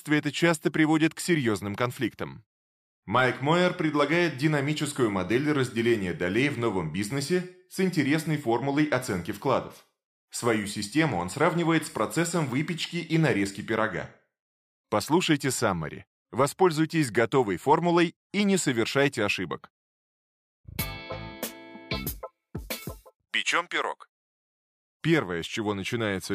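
No technical faults are audible.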